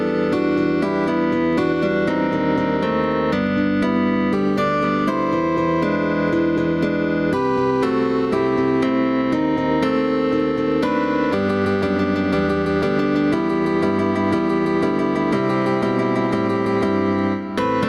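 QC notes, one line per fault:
throughout, gain pumping: The input gain is likely set far too high for the microphone, so a fast limiter or compressor keeps clamping down each time a loud sound arrives and releases again in the pauses. The level swings by roughly 5 dB as it does so. Loud and soft moments sit unnaturally close together, giving a squashed, breathing quality.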